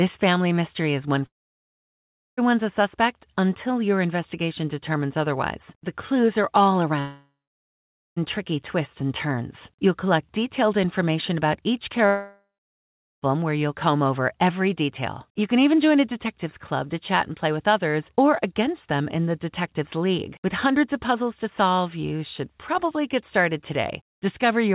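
Long network dropouts cut in at 1.26–2.39 s after "family mystery is one", 6.99–8.18 s after "clues are all", and 12.06–13.27 s after "detailed information about each". Each time a buzz fades into silence. About 1.1–1.2 s is lost, likely to a network outage.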